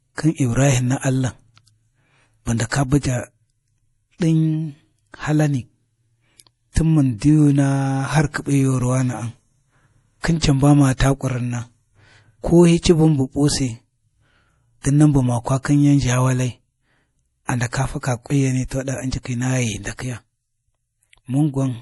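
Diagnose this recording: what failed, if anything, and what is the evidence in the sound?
The codec stage is at fault, most likely MP3 compression. Throughout the recording, nothing is present above 11.5 kHz, and the damage is plainly audible. The s sounds chirp metallically, the speech has a watery swirl, and consonant attacks smear. A simple low-pass filter or low sample rate would dull the top end cleanly. Here, the weak frequency lines switch on and off from frame to frame, which fits an encoder starved of bits at around 48 kbps.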